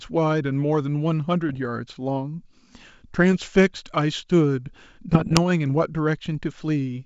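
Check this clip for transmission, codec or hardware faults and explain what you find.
Three bursts of damage point to bit errors on an ADPCM link, carried over wideband coding that sounds like full-rate G.722.

Bit errors on an ADPCM link occur at 1.49–1.65 s, 3.32–3.49 s and 5.12–5.39 s, with the error rate around 0.4 to 0.7 percent and the last burst heaviest. Each flipped bit knocks the decoder's step size and predictor off track, so the speech breaks into pops and rough, level-jumping bursts that ring briefly after each hit.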